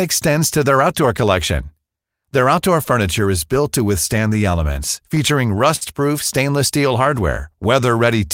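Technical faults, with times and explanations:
5.76 to 5.83 s, short stall from a late packet: a sound in this speech is held too long here, with a slight buzz or dip. A packet arrived late and the jitter buffer ran dry. The receiver stretched the last stretch of sound to cover the gap, filling about 55 ms. When the packet came in, playback picked up where it left off. Nothing is lost, but the delay grew by 55 ms.
6.78 to 8.27 s, jitter buffer slow-down: the speech runs a little slow, at about 94 percent speed, with the pitch unchanged. Sounds are drawn out. The jitter buffer was running low, or had just raised its target delay, and was rebuilding its reserve. To do that, the receiver repeated single pitch periods and small pieces of pauses, one after another. In all, about 90 ms of extra audio was added across this stretch.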